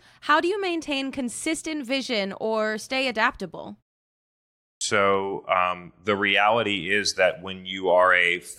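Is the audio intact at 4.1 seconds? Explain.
Yes, the speech at 4.1 seconds is intact, with no dropout, click, distortion or other fault at that moment.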